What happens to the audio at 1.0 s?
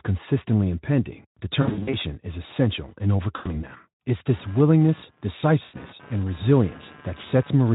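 At 1.0 s the speech is intact, with no dropout, click or distortion, only the light coloration of the Speex coding that runs through the whole clip.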